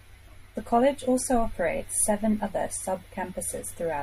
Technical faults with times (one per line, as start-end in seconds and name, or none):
0.00-4.02 MP3 compression